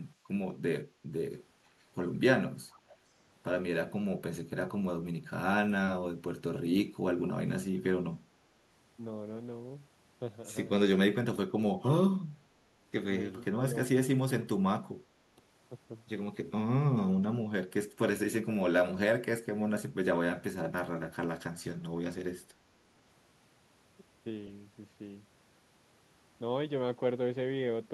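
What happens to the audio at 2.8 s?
At 2.8 s an echo leak is audible from 2.7 to 2.95 s: a faint copy of the speech, well below the main signal, returns about 470 ms late, likely from a far-end loudspeaker whose echo canceller let part of the microphone pickup through.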